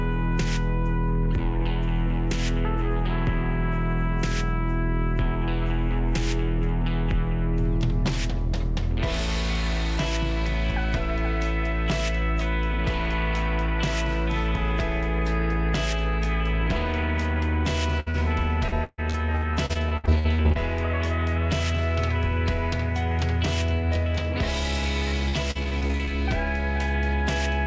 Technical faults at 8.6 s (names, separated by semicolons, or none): none